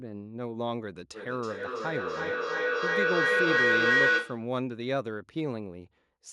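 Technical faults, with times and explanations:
1.14 to 4.53 s, feedback echo between two devices: the speech comes round again roughly every third of a second, thinner and ringing, piling up to about 7 dB above the speech. Another device nearby replays this microphone's sound, which this device's echo canceller cannot remove.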